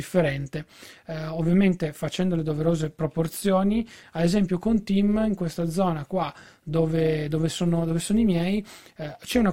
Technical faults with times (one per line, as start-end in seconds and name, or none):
0.00-9.53 overlap-add ripple